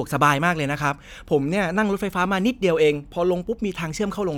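No technical faults are audible.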